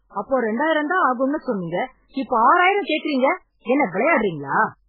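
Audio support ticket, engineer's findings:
Whole clip: speech heavily watery and swirly, weak detail flickering frame to frame, nothing above 4.6 kHz. Likely MP3 compression; fits around 8 kbps. Starved encoder zeroing quiet lines, fixed treble cutoff.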